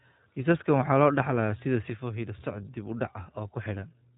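iLBC codec, throughout: the whole recording of speech carries the sound of this narrowband VoIP codec. Nothing above about 3.8 kHz survives, so sibilants and breath lose their edge and the voice sits in a boxed, telephone-like band. The damage is plainly audible as a slightly rough, synthetic texture, because each short frame's excitation is rebuilt on its own rather than flowing smoothly from the last. That fits the 20 ms frame, 15.2 kbps mode.

One channel drops out, from 1.90 s to the end at 4.18 s: the level falls abruptly by about 6 dB and stays down. This is likely the loss of one stereo channel before the signal was folded to mono. Material shared by both sides then arrives at half amplitude, which is the 6 dB step heard here. Anything carried only by the missing side vanishes from the mix.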